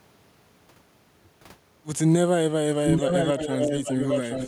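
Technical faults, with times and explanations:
2.85–4.47 s, echo leak: the speech returns 0.82 s late at roughly full loudness, likely from a far-end echo canceller missing its loudspeaker pickup.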